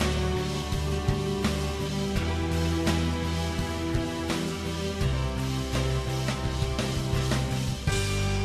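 No technical faults can be heard anywhere in this audio. Nothing in it calls for a timestamp or a closer listen.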